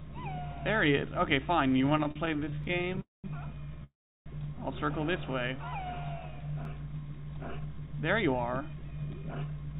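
From 1.68 to 2.99 s you get repeated stalls (stutter). The jitter buffer kept running dry, 31 times in that stretch, and the receiver stretched the last bit of sound to cover each wait. That adds about 350 ms in all, with the longest wait 40 ms, so roughly 27% of the span is filler. Nothing goes missing, but the sound drags and stutters.

At 2.64 s there's an overlapping-chunks join. The audio was handled in 4-second chunks, and each chunk begins about 13 ms before the previous one ends, so that sliver plays twice. It comes through as a quick click or hiccup, and it repeats at 6.65 s, exactly one chunk later.

Then come two call audio freezes, at 3.01 to 3.26 s and 3.84 to 4.28 s. The likely cause is packets held up in transit, leaving the buffer empty while the receiver carried the last sound on and faded it out. The first gap is 228 ms, ending in about 180 ms of silence. The second is 420 ms, with about 340 ms silent. 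Playback then resumes right where it stopped, so nothing is lost, just delayed.

From 5.32 to 5.77 s there's a jitter buffer slow-down. The receiver was rebuilding its reserve by repeating tiny pitch-period-sized pieces over and over, adding 71 ms. The sound runs at about 86% speed with the pitch unchanged, so things come out drawn out.

Finally, from 7.52 to 9.74 s there's a jitter buffer speed-up. The buffer had more queued than it wanted, so it kept snipping out short pitch-period pieces, around a third of a second in total. The result plays at about 114% speed at the same pitch and sounds noticeably hurried.

Throughout, nothing is heard above 4 kHz, which fits the narrowband G.711-style call path the audio went through.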